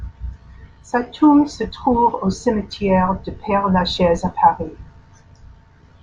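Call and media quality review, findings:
No faults found in the speech recording. Nothing audible points to any component needing a ticket.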